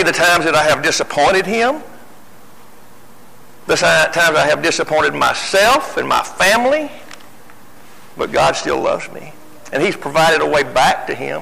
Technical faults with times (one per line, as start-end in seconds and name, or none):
0.00-11.41 hard clipping